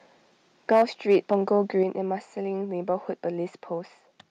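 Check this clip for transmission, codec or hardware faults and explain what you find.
Yes, there are faults here, and they're on the hardware and input side rather than transmission or codec.

Microphone overload shows up from 0.71 to 0.82 s and again from 1.10 to 1.57 s. The input was likely set too hot, so peaks ran into the converter's ceiling and had their tops sheared off. The first burst is about 5 dB over, with roughly a tenth of samples flattened, so it crackles harshly. The second is gentler, about 2 dB over with only a sliver clipped.

Microphone volume stepped down at 0.82 s by about 2 dB and again at 1.83 s by about 4 dB. These are likely the call software reacting to those overloaded peaks by cutting the input gain in one go, so the speech and background both drop abruptly right after the distortion.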